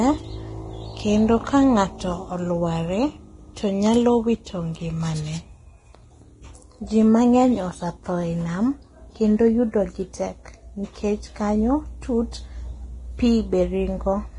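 Throughout, the speech cuts off near 10.6 kHz with grainy, hissy treble, likely heavy Vorbis compression near 30 kbps; plain low-pass filtering would sound dull, not noisy.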